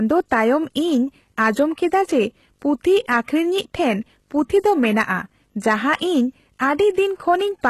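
From the start and running through the whole speech clip is a video or display buzz: a hum at 50 Hz, the picture's field rate, with hash above it and a thin whine near 15.6 kHz, the line rate, all sitting about 45 dB below the signal. It comes from a screen or video cable leaking into the audio path. Mains hum would also sit at 50 Hz, but it lacks the line-rate whine and the raspy, frame-locked hash.

Also constant is the smeared, metallic top end of HE-AAC compression. Only the lower spectrum is truly coded. The treble is rebuilt by copying lower bands upward, so sibilants sound lispy and gritty and nothing remains above about 12.3 kHz. The strength of this damage fits a low bitrate around 16 kbps as the likely cause. Plain low-pass filtering would sound dull, whereas here the treble stays bright but false.

Hard clipping then flattens the peaks in six places:
0.33 to 0.52 s, overdriven about 2 dB.
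1.40 to 1.62 s, just before "ᱠᱮᱫᱟ ᱡᱮ ᱯᱩᱛᱷᱤ ᱟᱠᱷᱨᱤᱧᱼᱤᱡ", about 3 dB.
3.11 to 3.18 s, between "ᱠᱮᱫᱟ ᱡᱮ ᱯᱩᱛᱷᱤ" and "ᱟᱠᱷᱨᱤᱧᱼᱤᱡ ᱴᱷᱮᱱ ᱯᱩᱛᱷᱤ", about 4 dB.
4.66 to 5.01 s, right after "ᱯᱩᱛᱷᱤ ᱟᱠᱷᱨᱤᱧᱼᱤᱡ ᱴᱷᱮᱱ ᱯᱩᱛᱷᱤ", about 6 dB and the harshest.
5.68 to 5.95 s, about 4 dB.
7.3 s to the end, about 2 dB.

Each time the signal exceeds what a stage can pass, and the flattened tops add crackling high harmonics. Unlike the codec grit, this fuzz appears only on loud moments.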